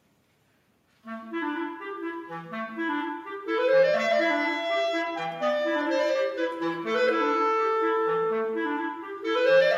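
Listening closely, nothing in the audio stood out as a technical fault at any point.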